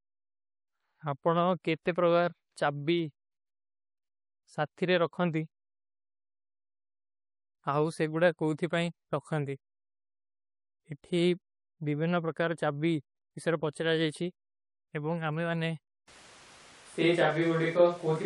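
A speech recording with a watery, swirly top end and smeared consonants throughout, likely from MP3 compression at a low bitrate, which fits around 48 kbps. At 1.83 to 1.86 s there's pre-echo, a 30 ms hiss rising about 14 dB just before an attack, which fits long 48 ms blocks with no switch to short ones. From 16.08 s to the end the sound suddenly turns roomy and hollow with thinner bass, likely a switch to a distant microphone: the level barely changes, but room noise rises to roughly 30 dB below the speech.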